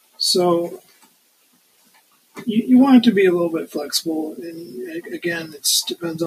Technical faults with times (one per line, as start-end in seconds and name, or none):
0.00-6.27 noise suppressor applied to music or sounds
0.00-0.20 sound cut by the noise suppressor
0.78-2.40 sound cut by the noise suppressor
5.48-5.63 sound cut by the noise suppressor